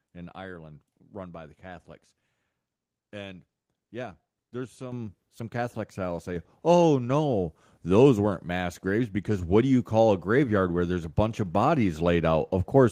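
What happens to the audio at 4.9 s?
A microphone volume step-up hits at 4.92 s, just after "yeah there's": the input gain was raised in one step, so voice and background jump together by about 9 dB.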